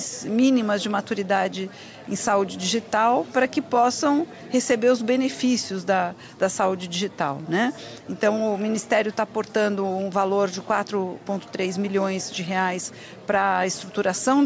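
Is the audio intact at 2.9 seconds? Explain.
Yes, at 2.9 s the audio plays through cleanly, with no dropout, click, distortion or other fault audible at that moment.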